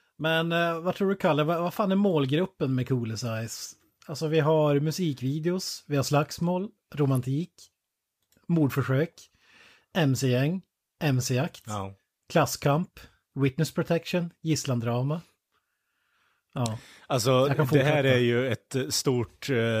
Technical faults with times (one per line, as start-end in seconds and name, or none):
7.15-7.17 electrical switching spike